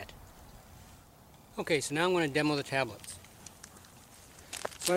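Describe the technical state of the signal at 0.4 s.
At 0.4 s the signal is intact, with no audible fault at that moment.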